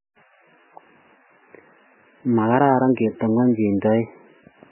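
From start to finish the speech sounds dull and boxed-in, with nothing at all above 3 kHz, and it has a heavy watery, swirling quality where quieter parts of the sound flicker in and out. That's likely MP3 compression squeezed very hard, which fits a bitrate down around 8 or 9 kbps. With so few bits, the encoder has chopped off everything above a fixed cut-off and is dropping weaker frequency lines frame by frame, and you hear that as the swirl.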